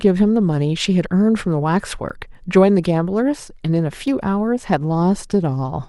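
Speech, with an overlap between stream segments producing brief clicks or tiny skips at 2.09 s and 4.08 s. The two events fall about 2 s apart, which fits segment boundaries every 2.0 s. At each join the time stamps of adjacent segments overlap, and the player discards the overlapping stretch as if it were duplicated, although that sound was never repeated. A few milliseconds of real audio disappear and the waveform jumps discontinuously.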